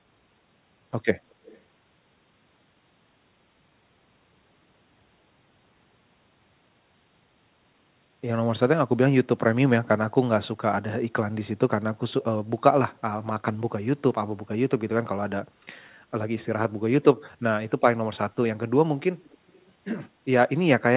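From 1.3 to 1.61 s, a faint copy of the speech returns 247 ms late, well below the main level. It recurs, fainter still, from 19.24 to 19.61 s at a 290 ms lag. This is echo leak, likely from a far-end loudspeaker whose echo canceller passed residual pickup back.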